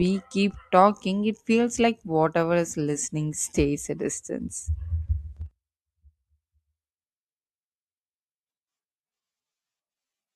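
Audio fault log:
throughout: sample clock jitter. Timing wobble, under a microsecond, shifts each sample, adding faint hiss about 50 dB down that rises on loud, bright speech.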